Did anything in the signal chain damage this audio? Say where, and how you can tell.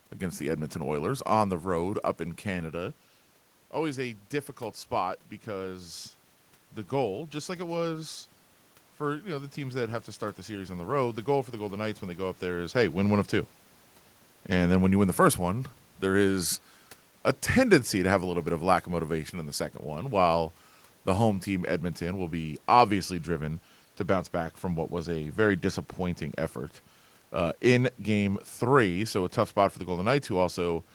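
Yes. Automatic gain falling runs from 12.96 to 22.93 s, between "there is hey" and "driven to bounce back". The call-processing AGC judged the input too loud or its background noise too strong and eased its gain down by about 4 dB, so speech and background sink together.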